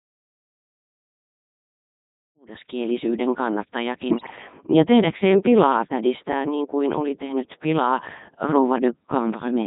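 Codec 2 vocoder, throughout: the speech is carried only as pitch, voicing, energy and a spectral envelope, and is rebuilt from sine waves, so the original waveform is lost. The heavy damage sounds robotic and buzzy, which fits Codec 2's 3.2 kbit/s mode, and it is present even as the level fades in around 2.5 to 2.9 s.

Bit errors on digital voice radio, 4.10 to 4.36 s: flipped bits corrupt the frame parameters the vocoder relies on, with an error rate around 4 percent across what points to roughly ten frames. The synthetic voice jumps in pitch, level and tone colour, breaking into bleeps, warbles and robotic gibberish.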